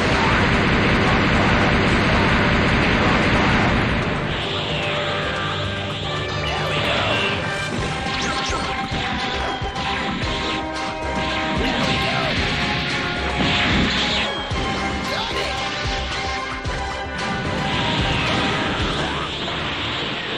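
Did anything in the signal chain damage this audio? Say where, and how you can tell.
Yes, in processing: a time-stretched section from 7.33 to 9.85 s plays 1.9 times fast, rushed at unchanged pitch, likely from software dropping short pieces.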